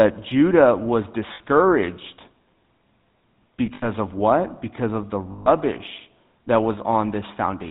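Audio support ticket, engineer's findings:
Buzzy, gravelly roughness throughout, nothing above 4 kHz. GSM full-rate codec; pulse-excited vocal-tract model, fits a 13 kbps stream.

Rough metallic ring held over gaps at 1.34–1.41 s (60 ms), 3.66–3.84 s before "of what" (scattered, longest around 70 ms), and 5.32–5.49 s after "of the" (140 ms). Lost GSM frames; last good frame repeated.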